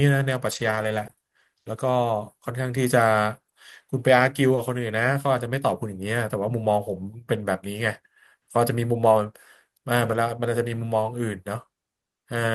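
From 0.51 to 1.23 s, packets went missing again and again, producing repeated packet loss with a robotic sound. Four gaps of up to 20 ms, about 80 ms in all, were each patched by extending the preceding sound, so roughly a third of a second comes out choppy and mechanical, with fragments dropped.

At 4.55 to 4.59 s, a short concealed packet loss occurs: about 20 ms failed to arrive in time, and the receiver bridged it by continuing the last sound before blending back. From 4.57 s, the final stretch was instead rebuilt from error correction carried in the following packet, so the moment registers as a brief smear or wobble rather than a hole.

From 10.07 to 10.17 s, lost packets were again rebuilt from error correction, about 60 ms in total, which fits three separate losses. The decoder played the low-bitrate backup copies, so nothing drops out, but those short frames sound coarser and noisier than the surrounding audio.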